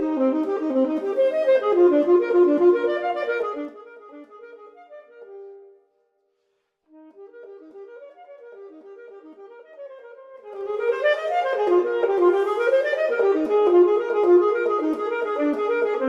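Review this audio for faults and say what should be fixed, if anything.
Zipper noise appears from 3.36 to 3.9 s and again from 10.32 to 10.94 s. In the first, the level falls by about 20 dB; in the second, it rises by about 20 dB. Both moves are made in 2 dB jumps with no smoothing, at roughly 30 steps per second and then roughly 20. Each jump leaves a small discontinuity in the waveform, so a ticking, zipping texture rides on the sound while the level travels. Ramp gain per sample or smooth it across each buffer so no step lands abruptly.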